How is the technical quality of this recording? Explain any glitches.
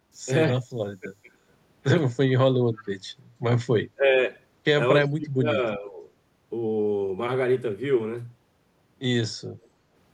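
The recording carries two recurring call-path faults rather than a clean signal path.

Speech suppressed in double talk occurs at 0.65–0.78, 1.0–1.3, 3.95–4.04, 5.01–5.47 and 5.77–6.02 s. The voice briefly ducks, by roughly 40 dB at the deepest early dip and only about 10 dB in the last. The likely cause is an echo canceller confusing overlapping talk with echo and attenuating both.

Echo leak appears at 2.76–2.87 s and again at 9.61–9.68 s as a short, faint repeat of the voice trailing 326 ms behind. It sits about 25 dB below the speech the first time and about 35 dB below the second. This is likely loudspeaker pickup that the far end's canceller failed to remove.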